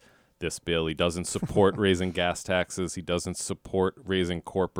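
No technical faults can be heard in this speech recording.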